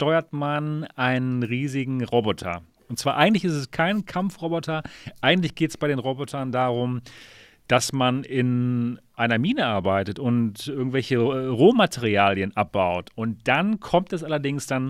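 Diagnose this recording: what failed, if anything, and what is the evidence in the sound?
Nothing failed: the sound gives no evidence of a fault at any stage of the recording.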